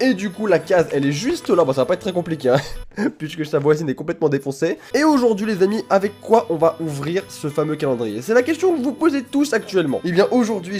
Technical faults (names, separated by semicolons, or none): none